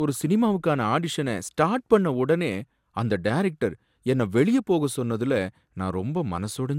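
Throughout the speech, the audio was likely run through a lossy encoder again and again, roughly ten times, each pass requantising on a shifted frame grid. This generation loss stacks noise and spectral gaps, and nothing survives above 17.2 kHz. The smeared, hollow, swirling texture and blurred attacks are heavier than a single encode would leave, and point to repeated MP2 coding at around 128 kbit/s.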